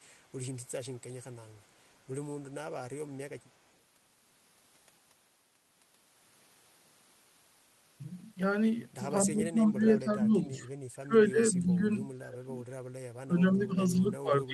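From 9.24 s to 10.65 s the speech dips by as much as 15 dB or so, which sounds like speech suppressed in double talk: the echo canceller likely couldn't separate this talker from the far side and pulled everything down. Inside that stretch, at 9.45 to 9.51 s, there's a brief echo leak, a faint copy arriving about 248 ms late and roughly 25 dB below the speech, likely residual loudspeaker pickup that got sent back. The suppression returns, deeper, from 10.94 to 13.04 s (around 30 dB down) and from 13.23 s to the end (around 25 dB).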